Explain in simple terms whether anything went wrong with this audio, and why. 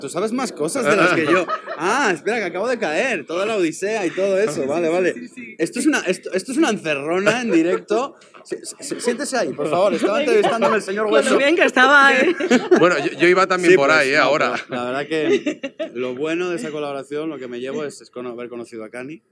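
Nothing went wrong here that I can hear; the audio runs along steadily from the first moment to the last without any glitches, gaps or odd noises.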